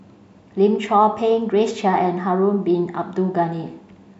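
No technical faults can be heard anywhere in this recording.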